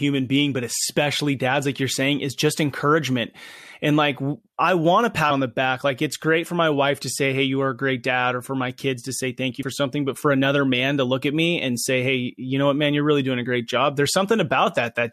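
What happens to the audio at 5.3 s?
Damaged data in the compressed stream at 5.30 s throws the decoder out of sync, producing a brief glitch between "like i want a" and "the back like it's".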